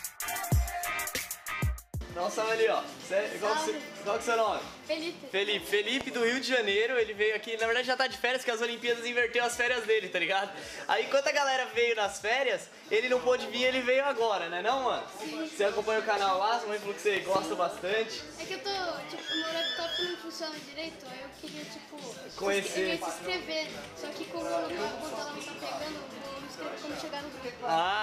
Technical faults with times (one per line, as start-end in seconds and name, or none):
6.01-6.03 loud pop
17.17-17.38 loud pop